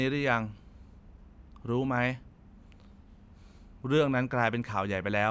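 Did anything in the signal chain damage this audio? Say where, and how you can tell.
No, nothing in the chain has left an audible mark on this speech recording. I hear no sign of damage at any stage, from capture through to playback.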